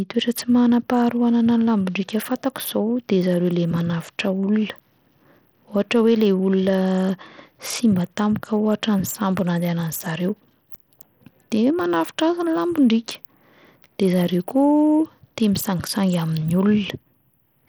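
Bluetooth SBC compression runs throughout the speech. It is audible as flickering, unstable treble with a gritty, grainy noise and aliasing riding on the sound. This is likely a coarse SBC encode starving the upper sub-bands of bits, which fits a bitrate around 80 kbps.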